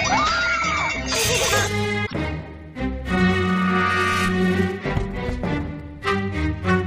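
At 2.03 s the audio breaks into a brief chirp or blip that lasts about 110 ms, until 2.14 s. This is damaged data in a compressed stream. Some bytes in the encoded file were lost, zeroed or overwritten there. The decoder reads those frames wrongly or rejects them. It then loses its place and hunts for the next valid frame header. The garbled output during that search is the blip you hear.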